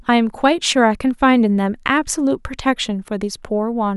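No technical faults can be heard anywhere in the speech recording, so there is nothing to place on the timeline.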